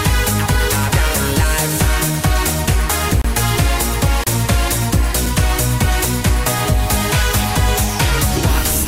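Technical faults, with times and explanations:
3.22 to 3.25 s, 4.24 to 4.27 s, 5.26 s: gap between stream segments, as timestamps of consecutive 1-second segments leave holes the player fills with silence, giving hard-edged dropouts of about 30, 30 and 4 ms.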